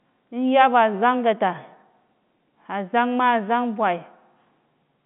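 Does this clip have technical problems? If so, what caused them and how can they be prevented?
No, this speech clip has no technical problems to fix. What you hear is the normal sound of G.711 telephone coding: the band runs from about 150 Hz to 3.5 kHz, with nothing above about 3.8 kHz, as expected for a standard A-law phone line.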